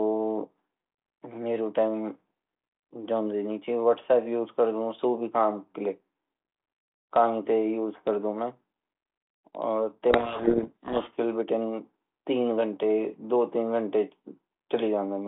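From 10.10 to 11.15 s there's a codec payload misread: the two ends disagree on the bit order of the G.726 code words, so the decoder unpacks scrambled values and the speech drowns in harsh, grinding distortion. Outside that stretch the 32 kbit/s G.726 telephone band carries only light coding damage.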